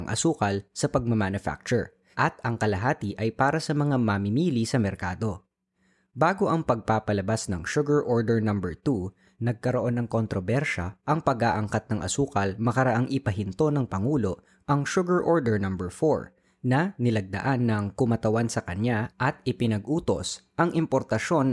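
Nothing in this speech recording stands out as a technical fault; there's no moment where the audio breaks, jumps or goes wrong, so there's nothing to flag.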